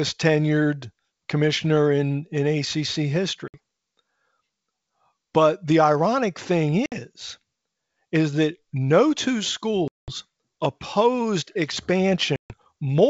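Packet loss on an ADPCM call cuts hard-edged silent holes at 3.48 s, 6.86 s after "the ironic thing", 9.88 s after "is that no two", and 12.36 s. They last 60, 60, 200 and 140 ms. The decoder then drifts, so speech returns slightly distorted before it settles.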